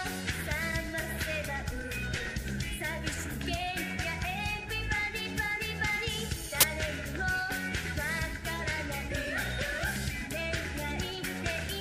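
The audio contains a brief file-tags-played-as-audio fault from 6.61 to 6.63 s. For about 28 ms, an embedded cover picture's compressed data is decoded as samples, producing a very loud white-noise burst with abrupt, hard-edged onset and cutoff.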